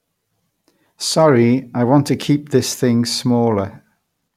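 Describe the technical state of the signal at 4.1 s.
At 4.1 s the speech signal is intact, with no audible fault.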